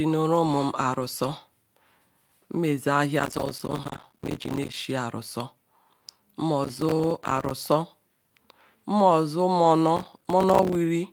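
A gritty crackling tears through the speech from 3.2 to 4.7 s, again from 6.6 to 7.5 s, and from 9.97 to 10.75 s. This is processor overload crackle: the processor kept missing deadlines on buffers of around 5 ms, and each miss left a hard-edged sliver of silence.

Inside the first burst, 3.37 to 3.47 s sounds briefly rougher and noisier, and 9.63 to 9.65 s does the same. Both are lost packets rebuilt from error correction. The decoder played the low-bitrate copies carried in the following packets, about 60 ms and 20 ms, which fits three lost packets and then one, so no gap is heard.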